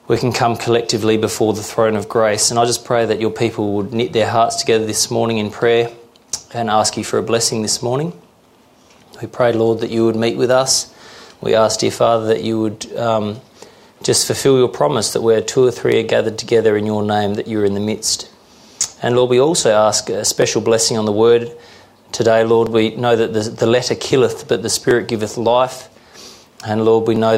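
A click or pop recurs at a steady 2.25 s interval from about 0.16 s to 27.16 s, roughly fifteen times in all, each a brief tick in the audio. The steady rhythm points to clock drift buffer slips. Two devices likely run on separate clocks that disagree by several hundred parts per million, so the buffer between them creeps until a block of about 70 samples is dropped or repeated, leaving a small discontinuity each time.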